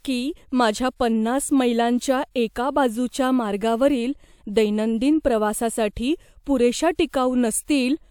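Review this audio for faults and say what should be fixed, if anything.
No faults; nothing to fix.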